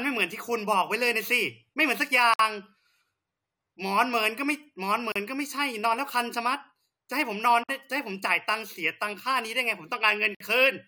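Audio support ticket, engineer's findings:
Gap at a join of encoded pieces, four times: 2.34 s (57 ms), 5.12 s (37 ms), 7.64 s (52 ms), 10.35 s (56 ms). Dropouts mid-speech, edges smeared, speech resumes where it stopped. Separately encoded segments joined untrimmed, so encoder start delay and last-frame padding stay in.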